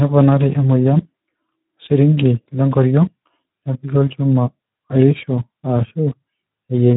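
From start to end, the speech carries Speex codec damage. Too few bits shape the excitation, so it sounds hoarse and noisy. Nothing remains above 3.8 kHz, fitting roughly 11 kbps.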